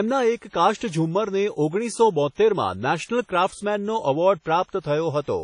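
The speech carries plainly audible codec damage throughout, with a ringing, washy texture and nothing above 10.1 kHz, likely from WMA compression at a low bitrate near 32 kbps. Pre-echo precedes attacks at 0.36, 0.77, 3.05, 4.63 and 4.80 s, where block-spread quantisation noise adds a brief hiss of 38 to 54 ms, smearing each onset.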